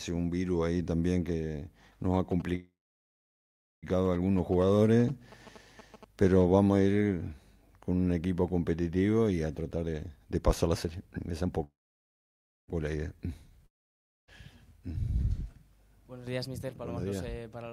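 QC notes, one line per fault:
2.31–6.43 s, GSM signalling bursts: a nearby 2G phone sending short groups of radio bursts is being rectified by the audio circuit, adding a galloping dit-dit-dit of short buzzes repeating at 217 Hz, sitting well below the main sound.
2.55–3.85 s and 11.64–12.70 s, call audio freeze: packets were likely held up and the jitter buffer ran dry. The last sound is stretched into a fading buzz, then about 1.1 s and 1.0 s of silence. Audio resumes where it stopped, so each freeze inserts a gap of roughly 1.27 s and 1.05 s without losing anything.
9.58–11.49 s and 17.05–17.72 s, jitter buffer speed-up: the buffer held more audio than its target, so the receiver cut short pitch-period slices repeatedly to reduce delay. The sound runs hurried at unchanged pitch, at 139% speed in the first stretch, removing around 0.7 s, and at 108% in the second, removing about 70 ms.
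13.66–14.30 s, long network dropout: most likely no packets arrived for this stretch. The receiver extends the last sound briefly as a fading buzz, then leaves about 0.59 s of silence, and the audio returns further on with about 0.62 s missing for good.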